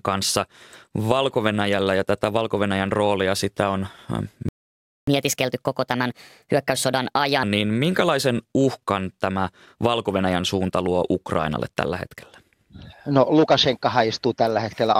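At 4.49 s the speech cuts out mid-flow and stays silent until 5.07 s, a playback stall of about 0.59 s, likely from the player running dry of data or its thread being blocked. The waveform shows a flat line, and the spectrogram shows a blank vertical band across every frequency.

From 5.07 s to 7.43 s, the catch-up at higher speed plays the backlog at 1.25 times normal rate. Speech sounds hurried and raised by roughly four semitones. On a spectrogram the harmonic stripes sit higher and are compressed in time, then drop back at 7.43 s.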